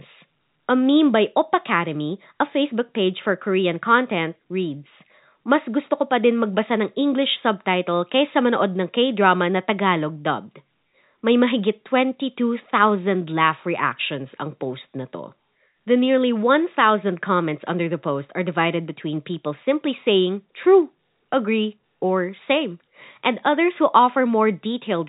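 Nothing goes wrong anywhere in this speech recording, which simply carries the narrow, band-limited character of an ordinary fixed-line telephone call.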